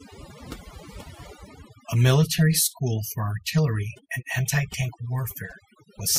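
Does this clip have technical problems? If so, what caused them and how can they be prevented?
Yes. The speech suffers from overdone noise removal across the whole clip. A noise reducer set far too aggressively suppresses every frequency band whose level sits close to its noise estimate, so the quieter components of the voice are cut along with the noise. Between phrases the background drops to near silence dotted with sparkling, chirpy remnants. To prevent it, apply gentler reduction and check the result on soft passages before committing.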